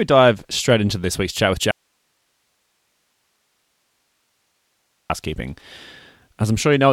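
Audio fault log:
1.71–5.10 s, audio dropout to a faint residue: right after "this week's chat with" the speech just vanishes for about 3.4 s, and all that's left is a bed of hiss sitting roughly 50 dB under the normal level. It's a hard cut in and out, nothing like a natural pause or a fade. Most likely the source feed broke while the rest of the chain stayed live, so you're hearing the open path's own noise floor.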